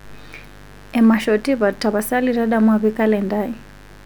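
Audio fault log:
Throughout, mains buzz: a steady, raspy buzz sits under the speech about 25 dB down. Sharp switching spikes at twice the 50 Hz mains rate spray harmonics into the kilohertz range. That edge sets it apart from a smooth, pure low hum.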